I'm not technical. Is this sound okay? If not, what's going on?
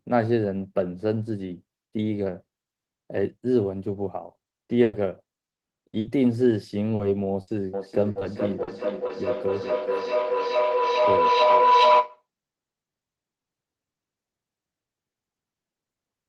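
No. From 4.65 to 6.07 s, and again from 8.11 to 9.11 s, there's repeated packet loss (robotic sound): gaps come one after another, giving choppy speech with pieces missing rather than a single dropout. At 6.95 to 7.01 s, a short concealed packet loss leaves a brief smear or wobble. At 7.41 to 7.49 s, a burst of packet loss is longer: the sound holds as a buzz or fading hiss, then jumps ahead. From 7.74 to 12.26 s a feedback howl builds, a tone around 1 kHz that pulses roughly every 0.4 s, growing rather than fading.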